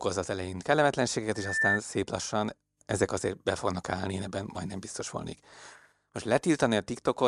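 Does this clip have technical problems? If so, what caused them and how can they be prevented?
Yes. From 1.35 to 1.80 s a loudspeaker feedback squeal rises out of the speech: a single tone at 1.8 kHz that swells over about a third of a second until it sits a few decibels above the voice. The microphone was hearing the loudspeaker it fed, and at that frequency the loop gain exceeded one, so the tone fed on itself. The rapid swelling from nothing sets it apart from a steady interference whistle, which holds one level throughout. To prevent it, keep the microphone out of the loudspeaker's coverage, lower the gain, or notch the ringing frequency.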